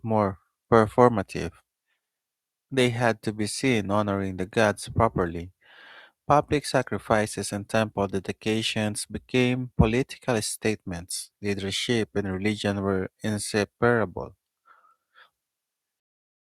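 No audible technical faults.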